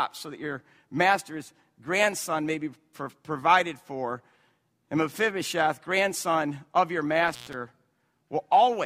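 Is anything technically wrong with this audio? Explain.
Yes, there's one fault in this speech clip, an intermittent contact, running from about 7.28 to 7.54 s, right after "grandson of your". What you're hearing is a loose cable or plug briefly losing its connection: the line opens for roughly 116 ms, so the speech drops out, with crackle as the contact breaks and remakes. While the line is open, a faint hiss is left.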